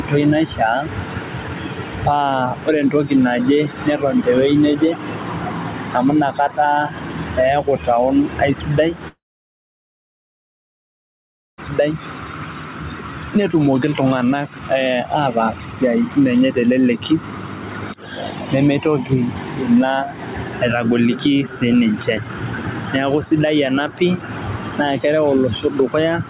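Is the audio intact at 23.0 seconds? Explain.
No. Throughout the clip, including at 23.0 seconds, there is gain pumping, likely from input gain set far too high with a fast limiter or compressor clamping it on every loud sound. Level swings by about 10 dB, so loud and soft passages sit squashed together. The narrow band, with nothing above 4 kHz, fits the telephone-grade call codec path.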